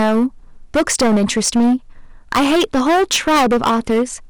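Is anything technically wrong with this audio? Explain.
Yes. Hard clipping runs through the whole speech clip: the level is driven about 18 dB past what the stage can pass, so roughly a fifth of samples hit the ceiling and are cut flat. The waveform shows squared-off plateaus, the spectrogram smeared high-frequency harmonics, heard as harsh fuzz on every loud syllable.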